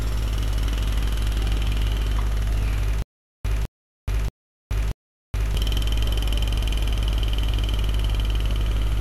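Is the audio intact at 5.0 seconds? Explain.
No. From 3.02 to 5.55 s there is a stutter with silent gaps, likely a stalled stream: the same 205 ms burst repeats four times, each followed by 426 ms of digital silence. The unchanging repeat is what sets it apart from random dropouts.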